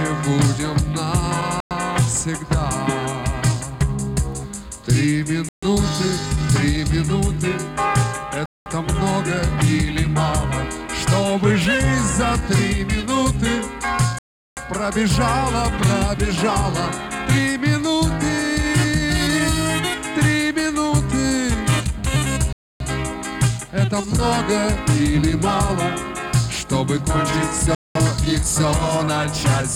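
Clean silences of 0.1 to 0.38 s break the audio at 1.60, 5.49, 8.46, 14.19, 22.53 and 27.75 s, the longest at 14.19 s. The likely cause is a Bluetooth stall: the receiver's buffer ran dry while delayed packets were resent. Unlike a concealed dropout, these gaps contain no smeared or repeated fill.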